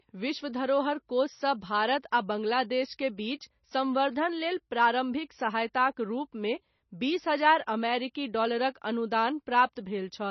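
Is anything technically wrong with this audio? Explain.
Yes. All the way through, this speech has heavy damage that points to MP3 compression at a very low bitrate, roughly 24 kbps. Starved of bits, the encoder has likely cut everything above 6 kHz and dropped quieter detail, so it sounds dull, watery and swirly.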